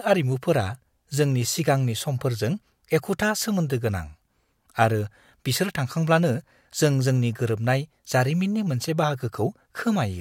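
No technical faults can be heard anywhere in the speech recording, with the signal holding steady and intact from the first moment to the last.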